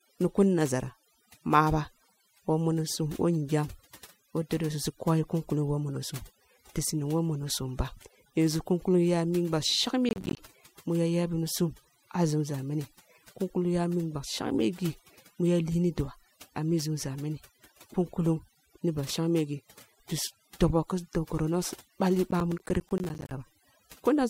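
Right from the start there's overdone noise removal. The noise reduction was pushed too hard, so bands near its noise estimate get gated away along with the quieter parts of the voice. The background sits in near silence with little twinkling specks.

Then we get processor overload crackle, first from 10.09 to 10.39 s, just before "mu ya yaghnisum a", and again from 22.31 to 23.31 s. The processor kept missing its deadlines, with a long run of buffers each dropped to a tiny hard-edged gap of silence. The gap spacing points to buffers of around 10 ms. It comes out as a gritty burst of crackle riding on the speech that stops once the load eases.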